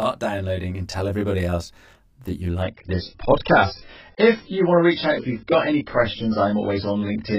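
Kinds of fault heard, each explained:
Channel delay (comb filtering): One channel runs late by roughly 20 ms, and when the two are summed to mono, everything they share cancels at evenly spaced frequencies. The notches start very low, around 20 Hz, and repeat at roughly 50 Hz intervals up the spectrum. Throughout the clip the speech sounds rough and slightly doubled.
Adaptive stream at a lower bitrate: At 2.63 s, right after "everybody else that you", the stream switches to a much leaner encoding and stays there to the end. The change is abrupt, with no gap in the audio. Nothing remains above 5.6 kHz, so the speech turns dull and band-limited, with more codec artefacts. The drop in quality fits a switch from a high-rate AAC version to one of around 12 kbit/s.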